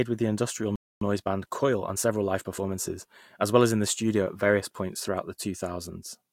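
Just after "with the industrial", at 0.76 s, the speech cuts to silence for about 257 ms: a playback stall, likely the player starving for data, not a gap in the recording itself. From 1.01 to 2.71 s comes time-compressed catch-up. Speech runs 1.15 times fast at unchanged pitch, unlike a sample-rate error, which would raise pitch too.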